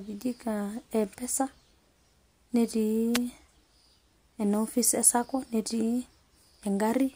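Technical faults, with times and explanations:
3.14–3.19 s, wireless microphone noise hit: a quick burst of static as the FM radio link fades through reflections and receiver noise briefly rises.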